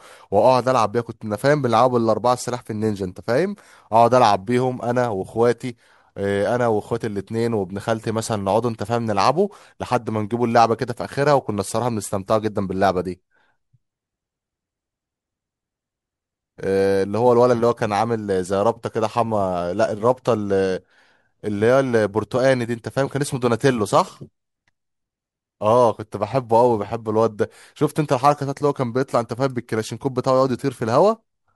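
A speech recording carries sample clock jitter from start to finish: the converter's clock wanders by a few microseconds, so each sample lands slightly off its proper instant, and the error scales with how fast the waveform is changing. The result is a grainy hiss sitting roughly 35 dB under the voice, swelling on loud passages and sibilants. Unlike ordinary background noise, it disappears completely in the pauses.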